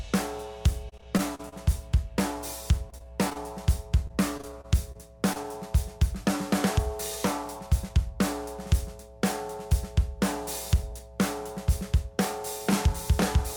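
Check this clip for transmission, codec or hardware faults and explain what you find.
Yes, there are transmission faults: three bursts of repeated packet loss and one jitter buffer speed-up.

Repeated packet loss (robotic sound) hits at 0.89–1.54 s, 2.90–3.37 s and 4.07–5.46 s. Packets kept going missing, and each hole, up to 40 ms long, was patched by stretching the preceding sound. The audio turns choppy, with small pieces missing.

A jitter buffer speed-up occurs at 7.59–7.90 s. Too much audio had built up, so the receiver trimmed short pitch-period slices, about 40 ms in total, to reduce the delay. The sound briefly runs about 9% fast at unchanged pitch and feels hurried.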